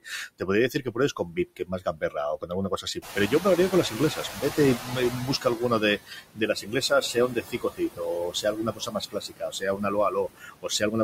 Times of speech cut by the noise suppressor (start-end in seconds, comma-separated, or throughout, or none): 0.39-10.95